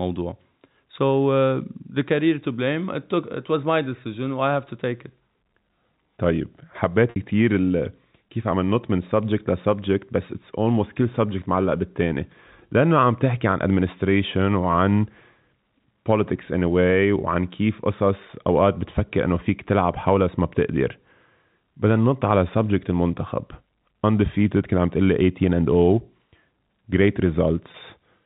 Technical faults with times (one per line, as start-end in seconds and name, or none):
7.10-7.16 packet loss with pitch repetition
27.72-27.74 packet loss with pitch repetition